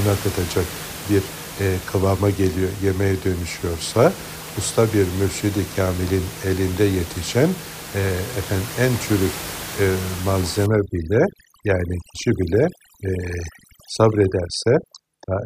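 Overdone noise removal runs from 10.66 s to the end. Set too aggressively against room noise sitting about 13 dB below the speech, it drives frequency bands near its noise estimate down or off, taking quiet parts of the voice with them and leaving near-silent gaps with twinkling specks.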